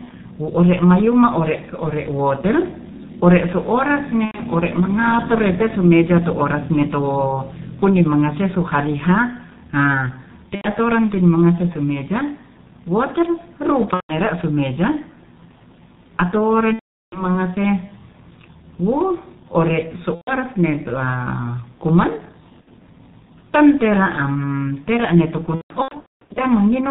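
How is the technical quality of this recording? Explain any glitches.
The recording is heavily degraded throughout by low-bitrate telephony coding, and packet loss interrupts the speech seven times.

G.723.1 codec, throughout: the speech is muffled and hoarse, with smeared consonants, consistent with G.723.1 at around 6 kbit/s. The codec passes nothing above 4 kHz, and its voice model updates only every 30 ms frame, so fast consonant detail gets averaged away. A spectrogram would show a hard ceiling at 4 kHz with blurred, blocky formant tracks.

VoIP packet loss concealed by the speech codec, at 4.25–4.40 s, 10.55–10.66 s, 13.94–14.11 s, 16.74–17.36 s, 20.15–20.33 s, 22.61–22.68 s and 25.55–26.42 s: each time, the speech turns into a stretched buzzy tone or coloured noise that fades. The decoder filled the missing packets by repeating its last pitch and filter at falling gain. The gaps range from 60 ms to 540 ms, and the one at 25.55 s is the longest. 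In the final event, 540 ms of losses are scattered across 810 ms, with the longest unbroken run 210 ms. The speech stays weak briefly after each gap because the decoder's state has to rebuild. On a waveform, these spots show a decaying envelope. A spectrogram would show flat, repeated harmonic stripes.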